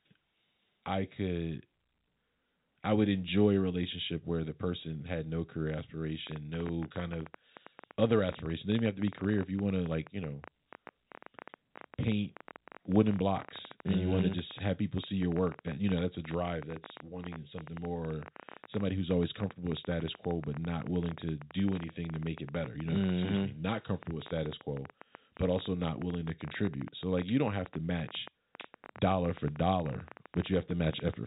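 A telephone-band speech recording, cut off above 3.8 kHz, carries a train of clicks from 6.27 s, just after "person had no career", to 31.15 s: about 12.8 uneven, alike pops per second, some three hundred, peaking louder than the speech and persisting through pauses. The likely cause is interference from nearby equipment rather than codec damage.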